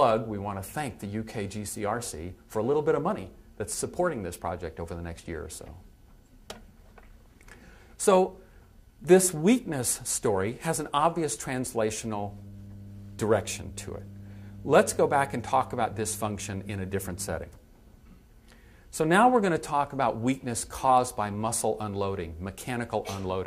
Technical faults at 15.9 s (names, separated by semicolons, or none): mains hum